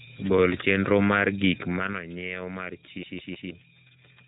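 From the start the whole thing runs through the iLBC codec, and you can plainly hear it: nothing above about 3.8 kHz, plus that slightly rough, synthetic edge. The bitrate fits the 13.33 kbps mode with 30 ms frames, each coded on its own.

At 3.03 s it turns into a CD stuck on one turn. A 0.16 s slice of audio replays three times with a brief mute at each jump, giving that quick, even stutter until 3.50 s, as if a scratch keeps kicking the laser back.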